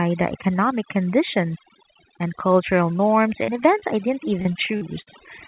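Throughout the clip, overdone noise removal makes the background drop and break up into twinkling, warbling specks. A noise suppressor set too hard has pulled down every frequency band that came close to its noise estimate, taking the quieter parts of the speech along with the noise. The effect is constant, which sets it apart from the brief dropouts below. The whole band also stops near 4 kHz, consistent with a narrowband G.711 call path.

At 3.44 s, just after "conditions and cultural norms", there is a short concealed packet loss. About 40 ms never arrived and was patched by extending the preceding sound, so it comes across as a quick smear. A second one, about 20 ms, lands at 3.80 s just before "I didn't" and is heard as a brief wobble. Each is a single isolated patch that blends straight back into the real audio.

From 4.42 to 5.09 s, after "I didn't", repeated packet loss produces a robotic sound. 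Four holes close together, the longest 56 ms, add up to roughly a quarter of that stretch being filled in. The patches come one after another, so the speech turns choppy rather than smearing just once.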